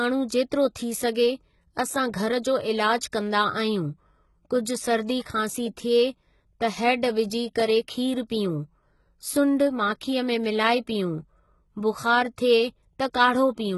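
Across the whole clip the speech carries heavy codec damage, with nothing at all above 11.8 kHz. The treble that remains sounds synthetic: sibilants come out gritty and lispy, with a metallic sheen. The likely cause is HE-AAC compression at a very low rate, consistent with about 16 kbps, where spectral band replication copies lower bands upward instead of coding the real high frequencies. On a spectrogram, the upper region looks like blocky, repeated copies of the bands below it, ending in a hard shelf at 11.8 kHz.

From 2.98 to 3.02 s, a pre-echo spreads a short hiss over about 38 ms before an attack, and a shorter one follows at 3.12 s, about 11 ms long. The codec spread its quantisation noise across a whole transform block, so noise sized for the loud onset also filled the quiet moment just before it. Each attack sounds softened and smeared. A waveform shows a low fuzzy smear ahead of each transient, and a spectrogram shows a faint broadband haze leading into it.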